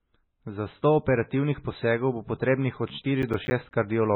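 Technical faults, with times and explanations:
Throughout: MP3 compression, likely the cause of the watery, swirly texture on this speech. Nothing survives above 4 kHz, so the treble is cut off flat and sibilants lose their hiss and turn into dull metallic chirps. The heavy damage points to a very low bitrate, around 16 kbps, where weak frequency lines blink on and off between frames. A spectrogram shows a hard ceiling at 4 kHz, with patchy, flickering blocks below it.
3.22–3.73 s: processor overload crackle, right after "posegov bo potrebnih od". For about half a second the sound tears into a gritty crackle. Several processing deadlines in a row were missed, each leaving a short hole of silence roughly 10 ms long, which fits small buffers of about that size. The abrupt edges of each hole cause clicks. In the waveform this shows as a run of sharp dropouts to silence, and in the spectrogram as thin vertical broadband streaks.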